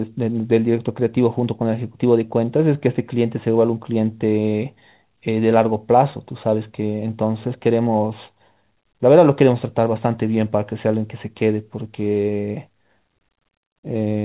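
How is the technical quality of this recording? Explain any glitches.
Nothing stood out on listening to the speech in this recording.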